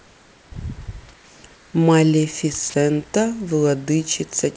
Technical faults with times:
0.00-0.52 comfort noise in place of the background
1.14-1.74 comfort noise in place of the background
2.70-2.74 sound dropped by the voice detector

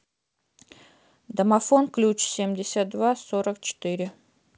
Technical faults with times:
none

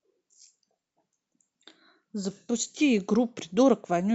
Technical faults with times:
none

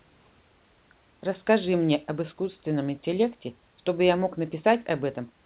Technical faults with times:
none

